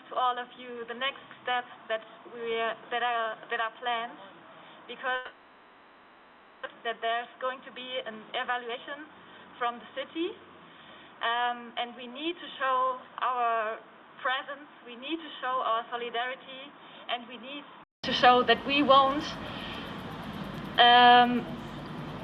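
From the start until 18.04 s the sound is dull and boxy, with nothing above 3.8 kHz, a level about 10 dB lower, and a noise floor about 30 dB below the signal. It clears abruptly at 18.04 s after a short silence of about 200 ms. This is likely an input switched to a poorer device, with recording returning to the better microphone at that point.

From 5.15 s to 6.67 s a buzzing fill stretches the last sound for about 1.5 s, never falling to silence. Around a second of audio goes missing, and playback falls behind by roughly half a second. The likely cause is a long network dropout that the receiver papered over with synthesized continuation.

From 6.75 s to 9.90 s the sound runs hurried at about 115% speed, with the pitch unchanged. This is a jitter buffer speed-up: the receiver trimmed short pitch-period slices repeatedly, shedding roughly half a second of backlog.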